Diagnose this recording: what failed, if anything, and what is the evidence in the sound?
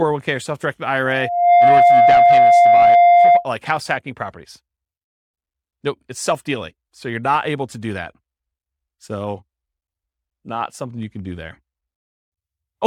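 Loop gain above one between loudspeaker and microphone at playback: a 700 Hz loudspeaker feedback squeal swells after "or self directed", 1.05–3.46 s, about 15 dB above the speech.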